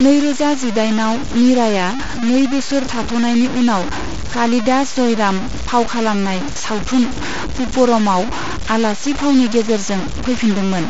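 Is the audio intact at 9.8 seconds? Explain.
No. At 9.8 seconds, as across the whole clip, the speech carries harsh grain that rises and falls with the voice, with the error only about 10 dB below the sound itself. The likely cause is low bit depth without dither, with samples truncated to very few steps, which fits about 4 bits. Unlike dithered quantisation's steady hiss, this grit tracks the signal. The Bluetooth headset band ending near 7.7 kHz is separate.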